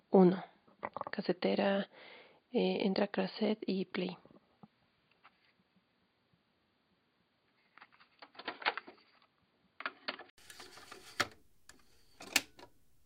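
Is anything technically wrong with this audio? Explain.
Yes. From the start to 10.38 s the sound is dull and boxy, with nothing above 4.7 kHz, then opens up again after an 80 ms silence. This is an input switched to a poorer device, likely a change of microphone or a headset profile. That device passes a narrower band, adds its own faint noise floor well below the signal, and shows no clear level jump. On a spectrogram the energy stops at a flat ceiling near 4.7 kHz, then fills upward after a brief gap visible in the waveform.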